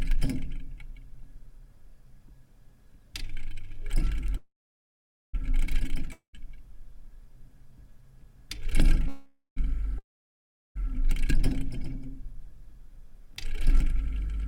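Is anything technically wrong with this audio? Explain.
Yes. There are two call audio freezes and two long network dropouts.

The call audio freezes run from 4.37 to 5.35 s and from 9.08 to 9.58 s. The last sound trails off as a fading buzz into silence, about 0.83 s of it in the first and 0.12 s in the second. The likely cause is a jitter buffer running empty while packets were delayed. Unlike a dropout, the audio resumes exactly where it stopped, with nothing skipped.

The long network dropouts at 6.12 to 6.37 s and 9.98 to 10.77 s sound similar at first: a fading tail, then silence of 0.12 s and 0.72 s. But when the sound returns it has jumped ahead, losing about 0.22 s and 0.88 s respectively, likely because the packets never arrived at all.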